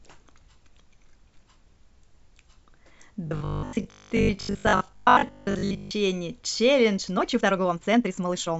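From 3.27 s to 5.91 s the speech takes on a robotic sound from repeated short buffers. The likely cause is audio arriving too slowly, so the playback path loops the last 20 ms repeatedly, replacing most of the real signal. That loop imposes a 50 Hz metallic buzz over the speech.

From 6.96 s to 8.60 s there is a time-stretched section. The audio runs about 1.82 times faster while pitch holds steady, likely because software dropped short segments to compress the passage. The pace jumps abruptly, and the speech sounds rushed.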